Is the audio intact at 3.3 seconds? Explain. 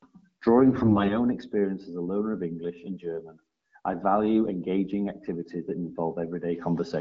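Yes, the audio is intact at 3.3 seconds, with the speech carried cleanly through the AMR wideband (HD Voice) codec at 12.65 kbit/s.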